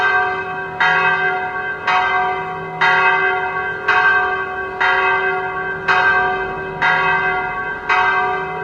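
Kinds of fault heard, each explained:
No technical faults are audible anywhere in this sound.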